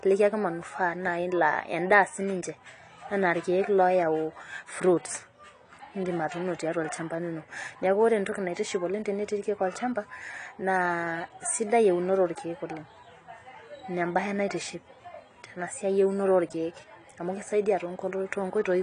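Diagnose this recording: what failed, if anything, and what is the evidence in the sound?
The codec stage has failed audibly, with AAC compression the likely cause. Throughout the speech, nothing is heard above about 10.1 kHz, and the coarse spectral quantisation leaves sibilants fizzy and dull, a smearing that fits AAC-LC running near 32 kbps.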